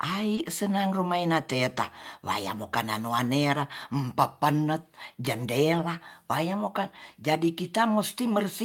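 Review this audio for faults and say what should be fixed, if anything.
Short concealed packet loss at 0.35–0.39 s: about 20 ms went missing, and the decoder extended the preceding sound, leaving a brief smear.

Lost packet rebuilt from error correction at 0.37–0.39 s and 5.73–5.79 s: low-bitrate backup copies stood in for 20 ms and then 40 ms, which fits one and two 20 ms packets. These stretches sound rougher, with grainier, noisier spectral texture.

Prevention: a steadier network path and a larger jitter buffer would let packets arrive in time, so the decoder would not need concealment or backup copies.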